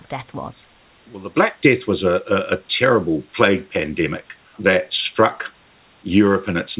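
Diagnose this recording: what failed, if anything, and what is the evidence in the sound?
Nothing failed; no faults heard.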